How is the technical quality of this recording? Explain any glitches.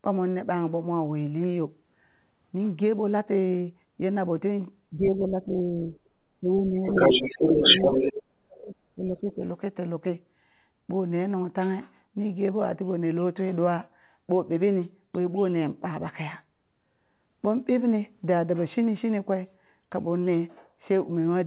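The recording has clear echo-control trouble between about 4.9 and 9.4 s, with several dropouts and a second voice bleeding in. The whole clip is band-limited to 4 kHz, which fits a narrowband G.711-style call path.

Speech suppressed in double talk occurs at 4.91–5.94, 6.35–6.95, 7.8–7.98, 8.31–8.76 and 8.95–9.42 s. The echo canceller likely mistook overlapping talk for loudspeaker echo and turned everything down. The voice sags by roughly 10 to 40 dB and nearly vanishes around 8.3–8.8 s.

The other side's voice leaks through from 6.86 to 8.23 s. Residual loudspeaker sound the canceller failed to remove likely reached the microphone. A second voice sits close to the main speech's level and overlaps the dips at 6.9 and 7.8–7.98 s.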